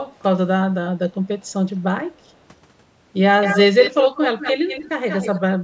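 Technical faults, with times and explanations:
3.41–4.89 s and 5.09–5.40 s, echo leak: a second copy of the speech trails the original by a fixed 186 ms. In the first stretch it is strong, only a little below the direct sound; in the second it is much fainter. The cause is likely a far-end loudspeaker whose echo canceller let its microphone pickup return down the line. Unlike room reverberation, which is a smooth decaying tail, this is a distinct repeat at one steady lag.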